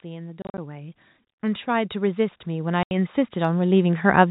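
A speech recording carried over G.711 telephone coding, with nothing above 4 kHz. Automatic gain rising runs from 0.05 to 4.25 s: the gain control judges the input too quiet and lifts it steadily by about 17 dB, so the voice and the background noise swell together across the clip. Packet loss filled with silence breaks the speech at two points. Between 0.42 and 0.58 s, about 100 ms of audio is missing in short gaps spread across 160 ms, the longest lasting 40 ms. At 2.83 to 2.91 s, a solid 80 ms hole appears. The receiver plays silence in place of the lost packets, so each gap starts and stops abruptly, and the gap lengths fit 10 ms packets.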